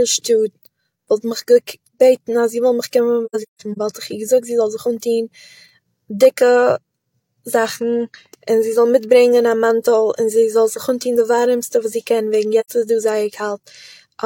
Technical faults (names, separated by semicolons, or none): AAC frame loss with muting